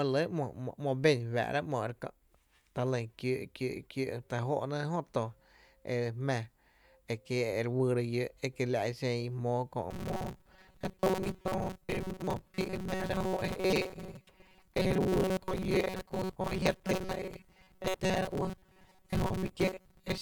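From 9.91 s to the end at 20.22 s, the speech takes on robotic sound from repeated short buffers: a rigid, metallic buzz pitched at 188 Hz that still loosely tracks the words. The likely cause is audio arriving too seldom, with a segment of about 5.3 ms looped to fill the gaps for most of that stretch. On a spectrogram this shows as flat harmonic lines spaced 188 Hz apart; the waveform shows identical short cycles repeating.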